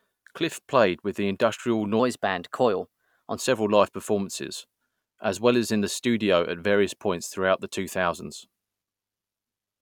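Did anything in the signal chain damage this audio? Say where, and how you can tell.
Yes. From 2.00 to 3.36 s there's a section at the wrong speed: the speech runs about 1.12 times too fast, so it comes out hurried and pitched up roughly two semitones, then snaps back to normal. Speed and pitch shift together, which rules out a time-stretch or pitch effect. The likely cause is a clock mismatch at the editing or playback stage, where that stretch of samples was read at a higher rate than it was captured at.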